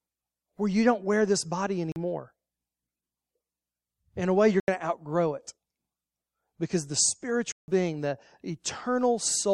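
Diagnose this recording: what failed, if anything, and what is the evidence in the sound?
The audio driver or buffer stage failed to deliver samples in time on three occasions, so whole blocks of the speech were replaced by zeros, a block of digital silence each time. The gaps fall at 1.92 s (40 ms), 4.6 s (80 ms) and 7.52 s (160 ms), each doubling the last. Because the signal drops straight to zero and returns with no fade, each hole starts and ends abruptly.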